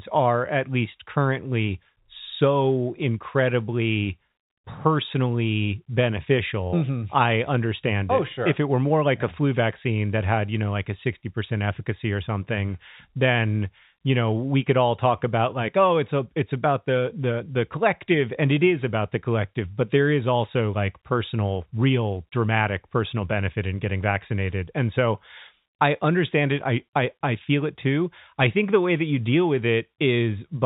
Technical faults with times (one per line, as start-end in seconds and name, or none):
none